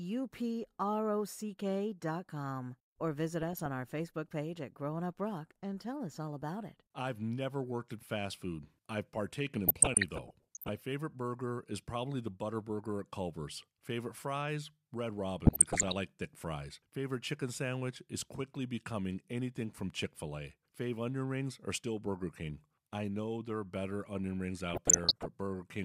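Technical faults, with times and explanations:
3.42 to 3.66 s, 9.68 to 10.69 s, 15.46 to 15.93 s and 24.68 to 25.26 s, DAB burbling: uncorrected bit errors corrupt MP2 scale factors and samples, making sub-bands jump in level for up to a frame and adding short blips of noise over the speech.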